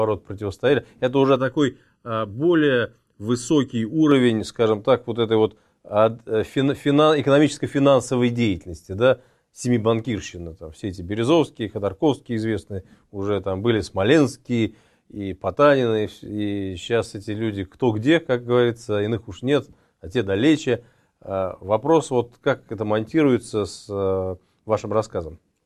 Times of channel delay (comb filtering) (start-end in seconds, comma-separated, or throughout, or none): 1.36-4.11